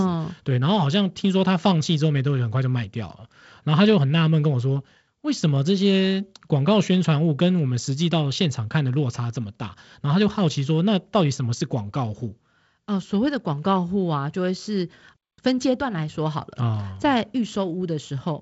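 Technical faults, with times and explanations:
No faults found; the speech runs through G.722 wideband coding at 48 kbit/s, which leaves light hiss and nothing above about 7.7 kHz.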